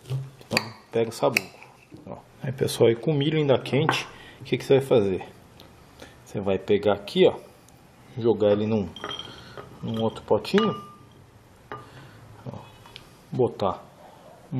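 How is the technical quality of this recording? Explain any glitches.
No glitches can be heard.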